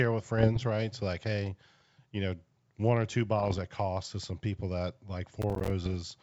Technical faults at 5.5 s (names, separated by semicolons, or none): processor overload crackle